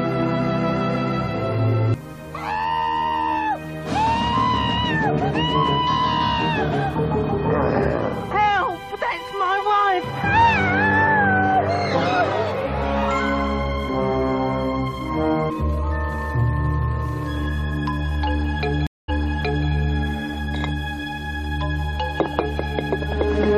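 At 18.87 s the sound drops out for about 0.21 s, then resumes 0.6 s earlier, repeating material: a stream reconnect, where the player restarted its decoder mid-stream.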